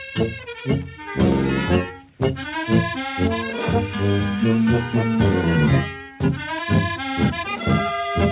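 No technical faults can be heard in this audio.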